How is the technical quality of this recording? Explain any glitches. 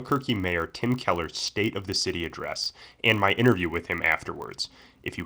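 The recording has one audible fault, present for the whole clip. Throughout the speech, a filter restarted on every block produces a 50 Hz buzz: each block, about 20 ms long, begins from silence, adding a small transient that rises and falls with speech level. A spectrogram would show thin vertical lines every 20 ms, and the waveform would show tiny regular spikes at block boundaries.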